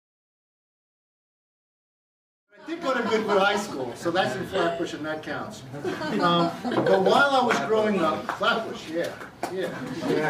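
No technical faults can be heard in this clip. The level rises in a smooth fade from about two and a half seconds and reaches full level at 3.32 s, with no click or hard edge.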